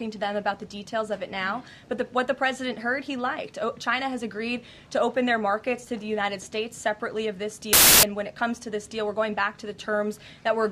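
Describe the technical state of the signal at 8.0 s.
At 8.0 s the signal is inside a burst of samples built from the wrong bytes, running from 7.73 to 8.03 s, about 0.3 s in all. For that stretch the decoder assembles each sample from misaligned or misordered bytes, so the rapidly fluctuating low-order bits land in the most significant positions. The result is loud, harsh broadband noise that replaces the program material, close to white on loud sounds.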